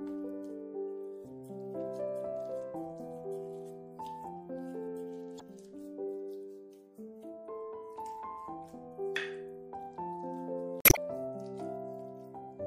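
Audio with plainly audible, watery, swirly smearing throughout, likely MP3 compression at a low bitrate around 64 kbps, constant rather than momentary. Damaged data in a compressed stream breaks in at 5.37 to 5.42 s and 10.80 to 10.98 s as brief glitches.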